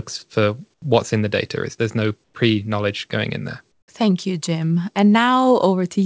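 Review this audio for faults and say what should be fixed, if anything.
Comfort noise replaces the real background in three pauses: 0.74–0.82 s before "what's in the" (about 14 dB quieter), 2.24–2.34 s between "there's no" and "pre knowledge going in" (about 4 dB quieter), and 3.72–3.88 s after "knowledge going in there" (about 10 dB quieter). Each time the room tone drops to a flat, featureless hiss, likely because the sender's voice detector stopped transmitting and the receiver filled the gap with synthetic noise. Switching off discontinuous transmission on the sending end would keep the genuine background running through the pauses.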